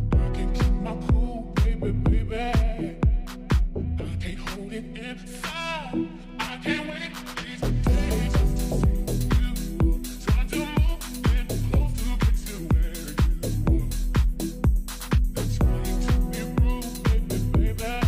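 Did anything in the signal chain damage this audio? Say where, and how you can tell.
No, nothing in the chain audibly damaged this audio.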